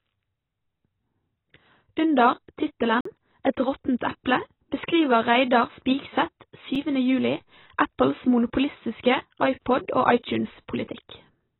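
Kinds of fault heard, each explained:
AAC compression: The speech sounds dull and muffled throughout, with nothing above 4 kHz, and the heavy damage gives it a smeared, warbling texture where detail should be. The likely cause is AAC-LC coding at a very low bitrate, around 16 kbps. At that rate the encoder lowers its cut-off and drops or crudely approximates many frequency lines in each frame, which strips the top end and leaves the remaining spectrum coarse and unstable.
Block of digital silence: The audio cuts abruptly to dead silence and back with no fade. The first hole, from 3.01 s to 3.05 s, lasts about 46 ms and is heard as a brief dropout. The second, at 6.75 s, lasts about 5 ms and comes across as a tick. In each case a run of samples was replaced by zeros, as happens when the output buffer isn't filled in time. The longer gap fits a 2,048-sample block.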